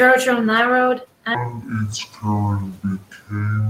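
From 1.35 s to 3.70 s the speech drops into a section at the wrong speed: it plays at half speed, so the voice turns slow, deep and drawn out, sinking by around ten semitones. The likely cause is the section being replayed against the wrong clock. Unlike a pitch shift or time-stretch, tempo and pitch fall together at one abrupt moment, and the room noise, about 24 dB below the speech, darkens with it.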